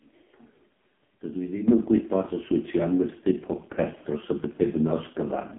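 AMR narrowband mobile codec, throughout: the speech loses everything above 3.8 kHz, and its heavy buzzy, synthetic tone from vocal-tract modelling fits the lowest 4.75 kbps mode.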